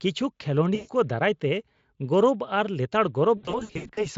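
VoIP packet loss concealed by the speech codec, at 0.75–0.90 s and 3.37–4.07 s: the decoder extrapolates lost frames, so the speech smears into a buzzy tone or coloured noise that fades. The first gap is about 140 ms; the second is scattered dropouts, runs up to 80 ms.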